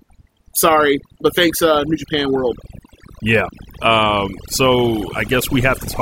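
From start to end the speech carries overdone noise removal: a noise reducer set too hard cuts individual frequency bands whenever they sit near its noise estimate, leaving twinkling specks in near-silent gaps. Unlike a noise gate, it never switches everything off at once.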